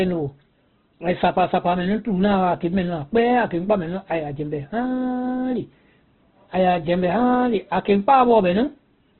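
Heavy low-bitrate Opus encoding, likely in its CELT music mode, affects the whole speech recording, and the damage points to a very low rate, around 12 kbps. The encoder has narrowed the bandwidth so far that nothing is left above about 4.1 kHz, giving a muffled, telephone-like top end. With so few bits, the bands are filled by folding and noise rather than left empty, so the speech sounds rough, grainy and noisy throughout.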